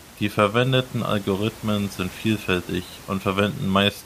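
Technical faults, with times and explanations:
No technical faults detected.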